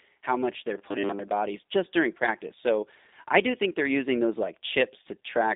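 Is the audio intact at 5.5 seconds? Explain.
No. A G.729 codec at what sounds like 8 kbit/s rebuilds the speech throughout, so at 5.5 s it sounds rough and synthetic, with nothing above 3.8 kHz.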